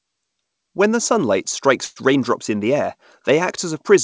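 At 1.85 s the speech stalls for about 0.14 s in a call audio freeze, likely from packets held up in transit until the jitter buffer ran dry. Roughly 111 ms is filled with a fading continuation of the last sound, then speech resumes intact but 111 ms later, over a band ending at 8 kHz that fits G.722.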